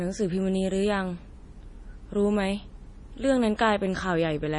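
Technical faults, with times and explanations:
Throughout, likely MP3 compression: heavy watery swirl and nothing above 10.6 kHz, fitting about 32 kbps, as scarce bits zero weak frequency lines frame to frame.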